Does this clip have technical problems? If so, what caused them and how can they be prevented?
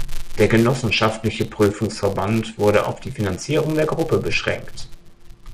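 Yes. A filter restarted on every block ticks throughout, forming a 172 Hz buzz that follows loudness and fits 256-sample blocks; spectrograms show evenly spaced vertical lines. Carry the filter's state from one block into the next instead of resetting it.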